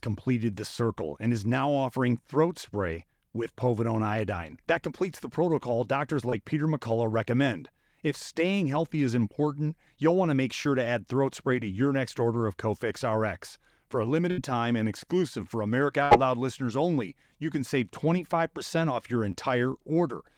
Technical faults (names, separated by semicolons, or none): short concealed packet loss; burst of packet loss